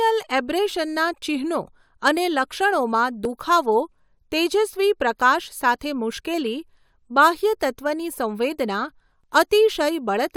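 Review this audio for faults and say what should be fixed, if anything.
Two brief skips, at 3.25 s and 9.24 s, come from overlap between stream segments. Adjacent 6-second segments carry overlapping timestamps, so the player discards roughly 11 to 12 ms of sound that was never duplicated, and the waveform jumps at each boundary. To prevent this, align segment timestamps so each segment starts exactly where the previous one ends.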